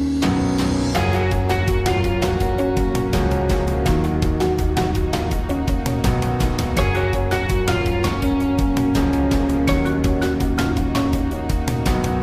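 No technical faults can be heard anywhere in the recording. Nothing in the sound calls for a timestamp or further comment.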